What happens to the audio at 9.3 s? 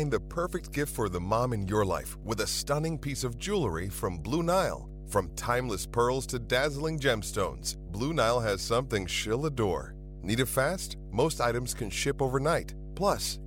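Mains hum runs through 9.3 s, as it does across the whole clip. Power-line interference, likely from a ground loop or a nearby transformer, leaks into the signal as a steady 50 Hz drone with low harmonics, sitting only about 10 dB below the speech.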